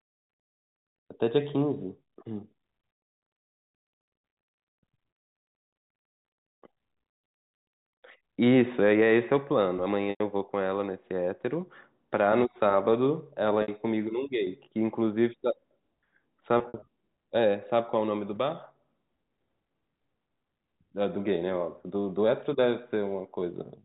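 Packet loss with pitch repetition occurs at 10.1 to 10.2 s (100 ms lost), 13.62 to 13.68 s (60 ms), and 16.58 to 16.82 s, where 120 ms is scattered across 240 ms in runs of up to 60 ms, consistent with 20 ms packets. The receiver fills each gap by repeating the last pitch period and fading it out, producing a brief buzzy, held tone over the 4 kHz-limited G.711 telephone band.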